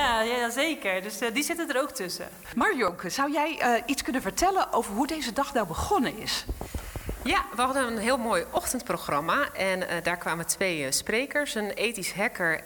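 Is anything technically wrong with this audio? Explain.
Yes. Sudden jumps forward in the sound occur at 2.88, 4.23, 5.64, 6.68 and 8.57 s. The cause is likely a dropped buffer (overrun), where samples went uncollected before the hardware overwrote them, so a short stretch vanished and the surrounding audio was spliced directly together with no gap. The loss at 2.88 s is around 30 ms. The others are each around 10 ms.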